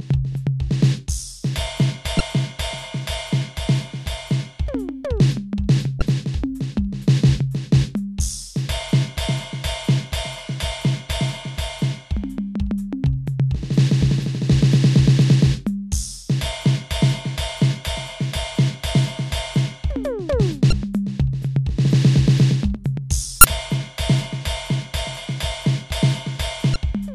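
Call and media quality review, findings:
Damaged data in a compressed stream: short glitches across the music, each about 35 ms, at 2.17–2.21, 5.99–6.02, 20.69–20.73, 23.41–23.44 and 26.73–26.76 s. Probable component is the decoder input. Corrupt bytes are likely causing misread frames, loss of sync and a resync at the next frame header.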